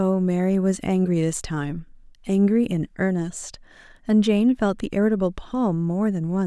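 Nothing in this speech recording stands out as a technical fault at any point.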